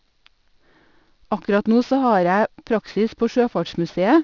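Aliasing runs through the whole clip. The speech was brought down to a lower sample rate with no filter in front. Content above the new limit was never removed. It folds back around 6 kHz and lands at unrelated frequencies. The folded energy sits roughly 30 dB below the speech. Sibilants sound gritty and metallic, and the spectrum pushes right up to the band edge. That edge points to resampling to about 12 kHz.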